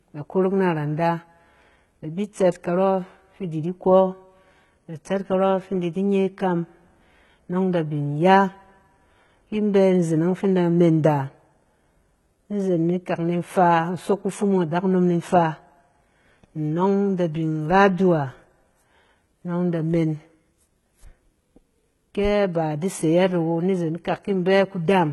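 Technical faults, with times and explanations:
Throughout, HE-AAC compression: s sounds come out gritty and metallic, with nothing above 11.8 kHz, likely HE-AAC at around 16 kbps rebuilding the treble by copying lower bands upward. A spectrogram shows smeared, repeated blocks in the upper band ending at a flat ceiling.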